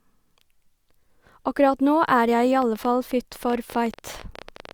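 From 2.62 s to 4.72 s the speech carries a train of clicks, roughly 30 irregularly spaced pops at about 14 per second, peaking a few dB above the signal, likely from interference or a faulty connection. These show as thin vertical spikes in the waveform and broadband stripes on a spectrogram.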